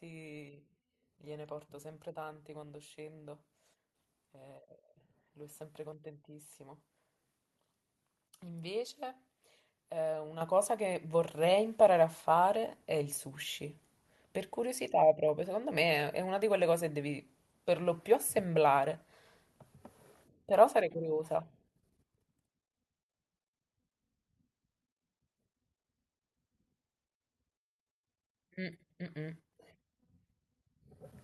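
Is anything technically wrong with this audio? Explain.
Yes. At 10.41 s the microphone volume steps up by about 8 dB in one jump. Software judged the input too quiet and raised the device gain. Speech and background noise get louder together, instantly, mid-stream. The call path's top end stops near 12 kHz.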